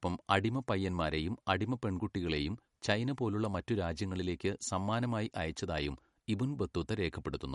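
Speech with MP3 compression throughout, likely from a low-bitrate encode around 48 kbps. Nothing remains above 11.1 kHz, and the weak detail that flickers between frames is plainly audible.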